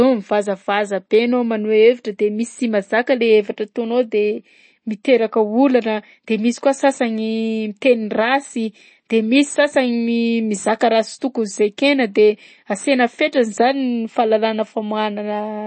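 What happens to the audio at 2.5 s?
At 2.5 s the speech carries the same MP3 compression damage heard through the whole clip: nothing above about 8.3 kHz, with a watery, swirling texture and chirpy s sounds as weak frequency lines drop in and out between frames, likely from a low bitrate around 32 kbps.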